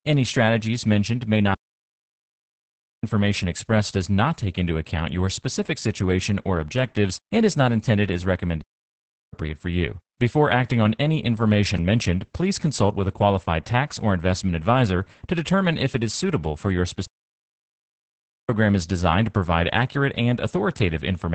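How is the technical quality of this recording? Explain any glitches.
The quality is poor. Heavy low-bitrate compression runs through the whole clip, and the playback stops dead three times.

Opus voice compression affects the entire clip. The encoder runs in its SILK speech mode at about 10 kbps, which squeezes the band to nothing above 8.8 kHz and codes the excitation coarsely. The speech sounds muffled, hoarse and slightly robotic.

Playback stalls interrupt the speech three times. The first runs from 1.54 to 3.03 s, lasting 1.49 s, between "strategies mentioned may" and "expressed does not take". The second runs from 8.62 to 9.33 s, lasting 0.71 s, between "is not intended as" and "for you". The third runs from 17.06 to 18.49 s, lasting 1.43 s, between "is suitable for your" and "is designed to provide". Each time the sound cuts to silence mid-flow and then resumes. The player likely ran short of data or had its thread blocked.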